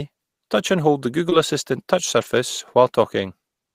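Speech, with two kinds of network damage. At about 1.29 to 1.33 s there is short concealed packet loss: roughly 20 ms never arrived in time, and the receiver filled it by extending the preceding sound before blending back, heard as a brief smear or wobble. Overlapping its end, from 1.31 to 1.33 s, and again from 2.21 to 2.27 s, comes a lost packet rebuilt from error correction. Here the decoder played a low-bitrate backup copy, so the 20 ms and then 40 ms stretches are present but rougher and noisier, which points to one packet and then two. The difference is that concealment invents sound from what came before, while the rebuilt stretches carry the real content in coarse form.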